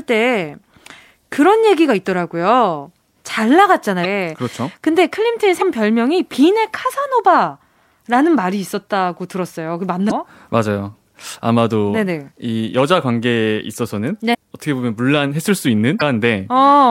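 Short blips, each lasting around 45 ms, break into the speech at 4.01–4.06 s, 5.58–5.62 s, 10.07–10.12 s, 14.31–14.35 s and 15.98–16.02 s. They come from damaged data in a compressed stream. At each point some of the encoded bytes were corrupted, so the decoder could not read those frames correctly and lost sync. It then searched for the next valid frame header, and that gap produces the brief disruption.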